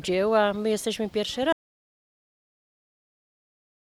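At 1.53 s the input likely disconnected or was muted, leaving an audio dropout to silence: the sound cuts off abruptly and silence with no room tone runs to the end.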